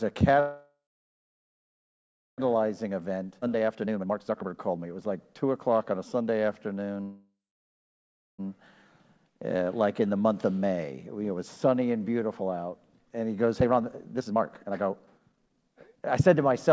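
This is a call recording, with the top end stopping at 8 kHz, which fits a G.722 wideband codec. The first fault is a call audio freeze at 0.40 to 2.40 s. The last bit of sound gets stretched into a fading buzz, and then there's about 1.6 s of silence. Once the audio picks up again it carries on exactly where it stopped, so nothing's lost, but roughly 2 s of delay has been added. The likely cause is packets stalling in transit until the jitter buffer ran dry. The same thing happens again at 7.01 to 8.41 s: around 1.4 s of filler in total, with about 1 s of that silent, and again nothing missing. The buffer then has to work off that extra delay, and you can hear the jitter buffer speed-up doing it. From 2.47 to 5.99 s everything runs at about 132% speed with the pitch unchanged, because short pitch-period chunks are being cut out over and over, roughly a second's worth in all. From 13.60 to 16.68 s it happens again, faster this time at about 142%, trimming something like a second and a half, and it sounds noticeably rushed. 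In the middle of the first speed-up, at 3.41 to 3.44 s, there's also a skip ahead. Playback jumps forward across a gap of only about 10 ms, and roughly a second of audio is simply dropped, with the two sides butted almost straight together.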